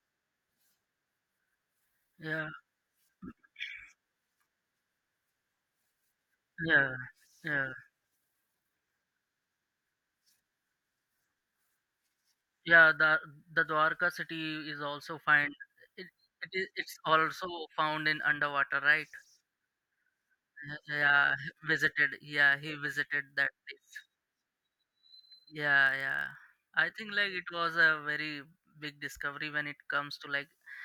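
A block size mismatch with zero padding runs from 25.84 to 26.66 s, ending just before "I think like". One stage hands over blocks slightly shorter than the next stage reads, and the shortfall in each block is filled with silence. Those tiny repeated gaps produce a buzz at 43.1 Hz, which fits a 1024-sample read block. The speech slows only to 0.999 of its normal speed, so the pitch stays essentially unchanged.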